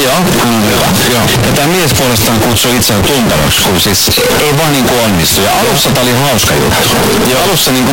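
Throughout, the speech is very loud and harsh, with background noise as loud as the talking, yet pitch stays traceable. The waveform is a near-square block at an almost fixed, high level, and the spectrogram is dense broadband. Likely a float read as integer: 32-bit float samples decoded as 32-bit integers.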